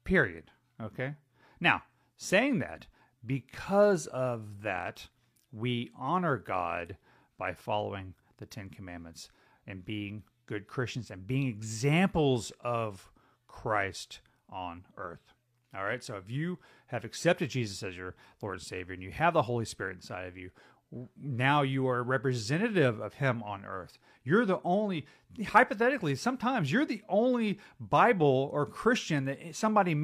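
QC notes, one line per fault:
No technical faults turn up anywhere in the signal on listening.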